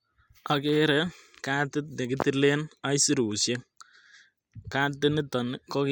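Listening to the speech recording, nothing stood out as a technical problem at any point.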